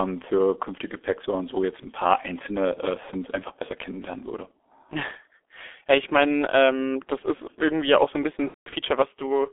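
G.723.1 codec damage runs through the whole speech recording: the band is confined to roughly 300 Hz to 3.5 kHz, and the slow-updating low-rate voice model leaves the speech muffled and hoarse with smeared consonants, which fits a bitrate near 6.3 kbit/s. VoIP packet loss concealed by the speech codec follows at 8.48 to 8.75 s, just after "auch so ein bisschen". About 210 ms goes missing across 240 ms, with the longest gap 180 ms. The decoder stretches its last pitch and filter into a fading sound that is muted from the third lost frame in a row, and the damaged speech recovers slowly afterwards.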